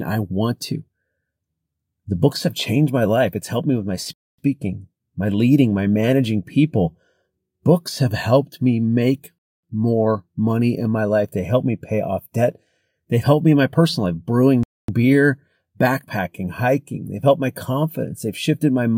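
Speech, interrupted three times by a gap between chunks. Silent holes of 250 ms open at 4.13, 9.38 and 14.63 s. The spacing is regular: 5 s of audio, then a gap. That points to the speech being delivered in 5-second chunks, with silence inserted at every join. Nothing seems cut out. The flow simply stops and restarts at each boundary.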